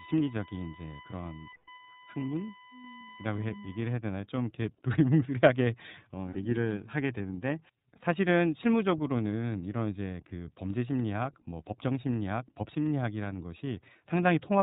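A speech recording carried over the iLBC codec, with clearly audible coding damage throughout. Nothing above 4 kHz survives, and the voice has the slightly rough, synthetic edge of a narrowband codec that codes each frame's excitation independently. The character fits the 30 ms frame mode at around 13.33 kbps, the lower-rate iLBC setting. From the start to 3.93 s there is also a USB whine: a steady 1 kHz tone, about 15 dB below the speech, caused by the bus's 1 ms frame current leaking into the audio through the power or ground path. Two stretches of lost iLBC frames appear. From 1.50 s to 1.68 s, 180 ms of audio is missing, which fits six consecutive 30 ms frames, and the decoder fills the gap by repeating the last pitch cycle mixed with noise, producing a held, buzzy vowel-like sound. At 6.30 s to 6.37 s a shorter 60 ms gap, matching two frames, gives a brief drawn-out buzz. Because iLBC frames do not depend on the one before, clean decoding returns almost immediately after each gap.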